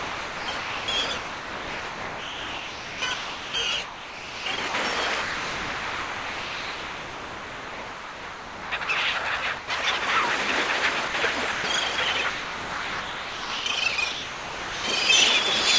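From 0.00 to 8.88 s the sound is chopped by the voice detector: about 7.26 s of it is replaced by steady comfort noise in several holes, likely because the sender's detector kept switching off. A spectrogram shows bursts of sound separated by flat, even noise bands, and a waveform shows the same gaps as low, uniform stretches.

At 9.58 to 9.70 s the sound is dropped by the voice detector for 120 ms, likely because it was mistaken for background. A smooth noise patch fills the gap, showing as a short featureless block between sound on either side.

From 11.08 to 14.84 s the chopping returns, with 2.32 s filled by comfort noise. On a spectrogram, real sound alternates with flat synthetic noise, and the waveform shows the sound cutting in and out. Throughout the clip, nothing appears above 8 kHz, which fits a G.722 call path.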